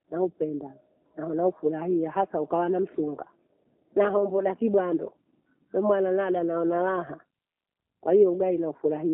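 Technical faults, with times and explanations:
Throughout, G.729 codec: speech is held to a telephone band of 300 Hz to 3.5 kHz and sounds plainly rough and synthetic, which fits an 8 kbit/s coder rebuilding each 10 ms frame from a vocal tract filter and sparse pulses. A plain band-limit would sound narrow but clean.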